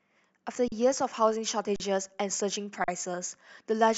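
At 0.68, 1.76 and 2.84 s the speech briefly freezes for 40 ms each time, a regular underrun with held sample roughly every 1.08 s. The output buffer ran dry, so the converter just sat on its last value. You get a flat stretch, stopping without much of a click. Since essentially nothing was dropped and playback picks up where it left off, the restart is fairly soft too.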